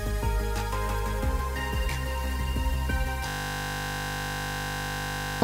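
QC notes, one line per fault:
3.28–5.42 s, system hang loop: the sound abruptly becomes a steady 50 Hz buzz that runs to the end of the clip. One 20 ms slice of audio is repeating exactly, over a hundred times, because the system froze while the sound hardware kept replaying the same short ring buffer. A loop that short repeats fast enough to fuse into a tone rather than a stutter, and about two seconds of real audio are lost.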